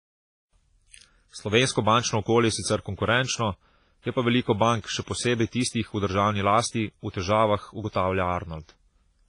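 Speech that sounds washy and ringing throughout, with a hiss that swells and fades along with the talking and no content above about 10.4 kHz. This is likely heavy WMA compression, consistent with a low bitrate around 24 kbps, where long transform blocks smear quantisation noise over time and weak detail is discarded. From 7.89 to 7.95 s, a brief hiss of about 59 ms comes just before a sharp attack, which sounds softened. That is pre-echo: the codec spread noise scaled for the loud onset across the whole block, filling the quiet gap before it.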